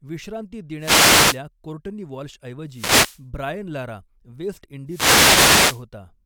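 Wireless microphone noise hits at 0.78–1.42 s, 2.67–3.25 s (just before "ब्रायन लारा वेस्ट") and 4.86–5.85 s (just after it): the FM radio link fades, so receiver static swishes up over the speech. Unlike steady hiss or a digital dropout, each burst swells and recedes.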